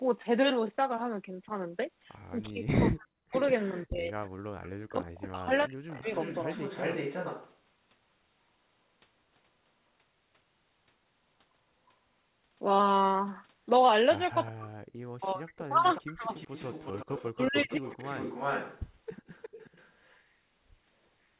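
Echo leak at 2.45–7.55 s, 14.46–14.51 s and 15.94–20.18 s in this speech recording: a copy of the voice returns 360 ms late, roughly 10 to 25 dB down, likely from a loudspeaker echo canceller letting residue through. Speech suppressed in double talk at 2.49–6.14 s, 14.51–16.29 s and 17.31–17.84 s: the voice dips by up to around 40 dB or breaks up while the far side plays on the loudspeaker, likely as the canceller mutes both signals together.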